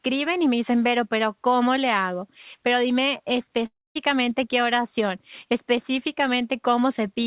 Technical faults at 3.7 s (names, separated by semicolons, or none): long network dropout